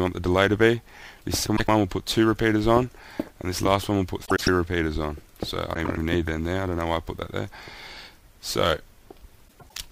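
Frames out of order at 1.46, 4.25, 5.75 and 9.48 s: two adjacent 0.1 s blocks swap, giving a garbled flutter, but unlike a dropout, no time goes missing.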